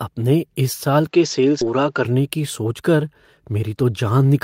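Speech, with three distinct faults. From 1.07 to 2.05 s the sound loses everything above 7.6 kHz and picks up a new noise floor about 45 dB below the signal, with no gap and no obvious level change; an input switched to a poorer device is the likely cause. At 1.61 s a skip ahead drops roughly 0.7 s of audio, splicing the two sides together with no fill. From 3.55 to 4.34 s a jitter buffer speed-up runs the speech at 112% without changing pitch, trimming about a tenth of a second so delivery sounds hurried.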